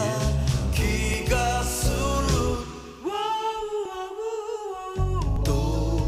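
At 1.14, 2.04, 3.85 and 5.36 s the sound jumps forward with no gap, the likely cause being a dropped buffer (overrun): samples were overwritten before being read, and the remaining audio was spliced together. Roughly 20 ms goes missing at the first and third points, around 50 ms at the last, and around 70 ms at 2.04 s. On a waveform each shows an abrupt discontinuity; a spectrogram shows a thin vertical broadband line.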